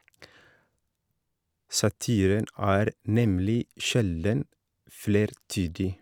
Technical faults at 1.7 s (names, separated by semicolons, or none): none